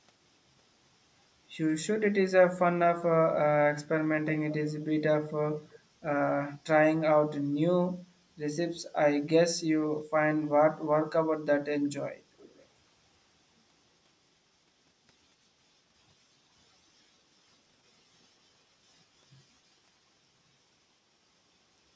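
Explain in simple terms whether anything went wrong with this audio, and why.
Echo leak at 5.51 to 5.76 s and 12.38 to 12.66 s: a faint, delayed copy of the speech returns about 0.36 s later, likely from a loudspeaker echo the canceller missed.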